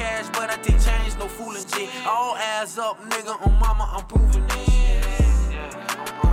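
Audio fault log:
No faults detected.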